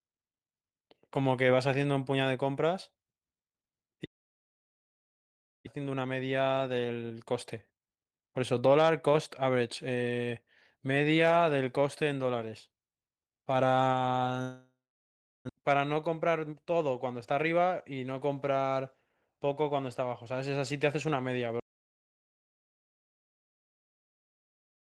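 Long network dropouts at 4.05–5.68 s and 14.42–15.51 s break up this speech recording. The first covers about a second of lost audio, likely from packets that never arrived. The last sound is stretched into a fading buzz, then about 1.6 s and 0.66 s of near silence. Speech resumes without the missing part. Jitter buffer speed-up follows each gap, at 5.76–10.31 s running at 112% speed and at 16.07–16.54 s at 109%. The receiver trims tiny pitch-period slices to drain the audio that piled up, roughly half a second and then a few tens of milliseconds, so speech sounds hurried at unchanged pitch. An audio dropout to silence begins at 21.60 s and runs to the end, with the signal cutting to silence and no room tone. The input was likely lost, through a disconnected device, a failed link or a mute, while recording continued.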